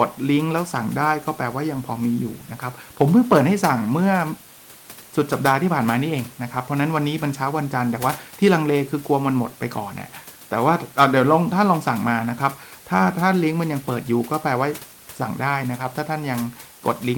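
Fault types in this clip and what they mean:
No faults are present.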